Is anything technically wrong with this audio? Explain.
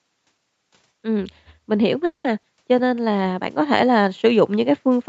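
Yes, there are four faults in this speech clip, heard through a call path whose spectrum stops at 8 kHz.

Automatic gain rising runs from 1.01 s to the end. The gain control judged the input too quiet and kept turning it up, so voice and background noise swell together. On a waveform the envelope widens steadily, and on a spectrogram the noise floor brightens.

A call audio freeze sits between 2.05 and 2.27 s. The last sound is stretched into a fading buzz or hiss for about 190 ms, including roughly 70 ms of near silence, and then speech resumes with nothing lost. The likely cause is delayed packets emptying the jitter buffer. It appears as a smeared, decaying band followed by a gap.

A skip ahead occurs at 2.42 to 2.46 s. Roughly 70 ms of speech was dropped while later audio was already queued, and the two sides are joined with about 10 ms of fill. The waveform shows an abrupt splice.

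A jitter buffer slow-down runs from 2.81 to 3.13 s. Repeated pitch periods add 48 ms, so speech plays at 87% speed with unchanged pitch, drawn out. A spectrogram shows stretched, evenly repeated harmonic patterns.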